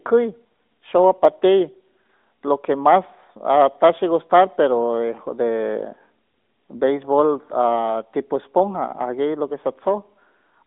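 Speech, with no technical faults audible anywhere.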